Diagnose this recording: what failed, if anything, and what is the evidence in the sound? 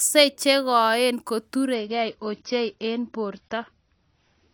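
The network-fed adaptive stream dropped to a lower bitrate at 1.74 s, after "che koen ko": the speech suddenly loses everything above 6.5 kHz, with no gap.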